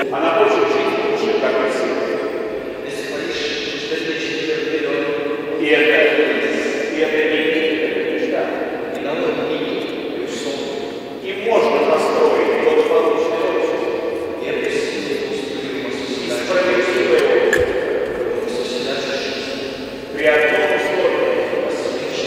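From 18.35 to 21.57 s there's a GSM phone buzz, a hard, raspy 217 Hz drone about 22 dB below the sound, steady like an active call being rectified by the audio circuit.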